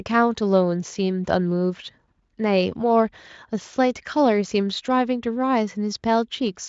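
There are no technical faults to describe in this speech clip at any point.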